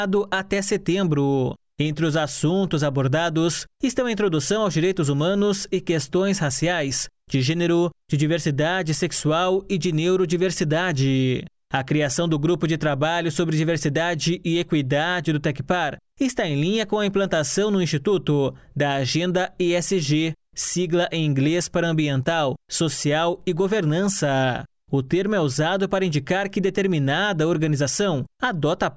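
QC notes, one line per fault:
No technical faults are audible anywhere in the signal.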